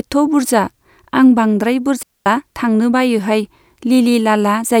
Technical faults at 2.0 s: digital wireless dropout

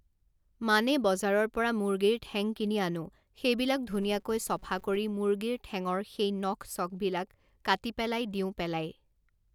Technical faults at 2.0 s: none

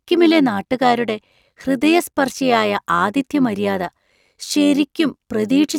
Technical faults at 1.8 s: overlap-add ripple

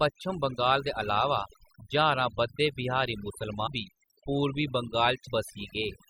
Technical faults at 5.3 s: overdone noise removal; compressed frames skipped

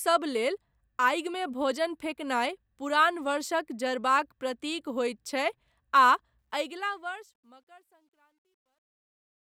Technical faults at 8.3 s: truncation distortion on a fade

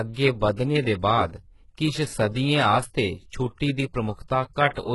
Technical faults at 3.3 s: HE-AAC compression

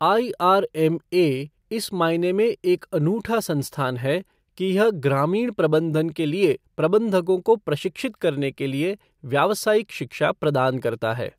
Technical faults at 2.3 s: none

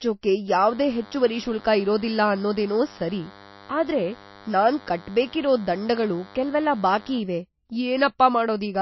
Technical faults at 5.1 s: MP3 compression; DECT cordless phone buzz

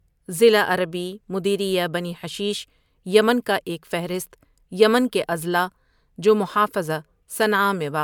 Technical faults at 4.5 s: generation loss

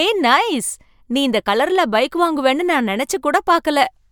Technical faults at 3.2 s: none

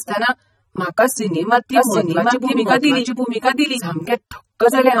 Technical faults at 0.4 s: AAC compression

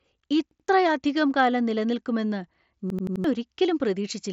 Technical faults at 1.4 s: none

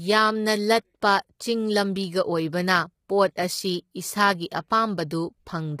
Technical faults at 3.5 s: low-delay AAC compression

